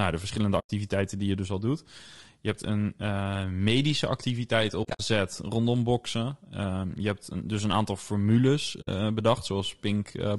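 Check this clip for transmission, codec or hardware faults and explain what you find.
Two faults are present in this speech: codec coarseness throughout and three short muted gaps.

Low-delay AAC compression, throughout: the speech sounds rough and grainy, with a dulled top band, likely from AAC-ELD at around 32 kbps, whose short frames resolve pitch harmonics poorly.

AAC frame loss with muting, at 0.59–0.70 s, 4.83–5.00 s and 8.81–8.88 s: the decoder zeroes missing frames, so overlapping windows fade the sound into soft-edged holes. The first follows "de verschillende", a 100 ms hole consistent with about five lost frames, before "die je dus al". The second follows "een eh medische activiteit", 120 ms of loss scattered over 160 ms, longest run around 70 ms, before "rondom boksen". The third follows "dus een aantal formules", a 60 ms hole.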